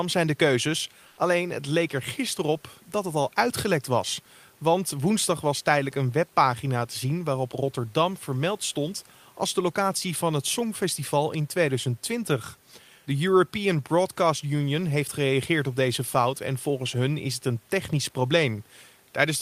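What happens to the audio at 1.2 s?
Just after "zijn de keuzes", from 1.07 to 1.17 s, the background becomes comfort noise. For about 100 ms the room's real texture gives way to a smooth, featureless hiss at the same level. The likely cause is Opus discontinuous transmission pausing the sender, with the receiver synthesising filler noise.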